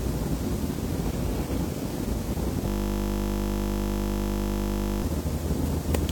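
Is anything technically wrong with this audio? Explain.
Yes. From 2.68 s to 5.03 s the audio falls into a system hang loop. The system froze while the sound hardware kept replaying the same 20 ms slice of its ring buffer, well over a hundred times. Because that slice is so short, the repeats merge into a steady buzz at 50 Hz. On a waveform, the section shows one identical 20 ms shape tiled end to end. A spectrogram shows evenly spaced horizontal harmonic lines every 50 Hz, frozen in time.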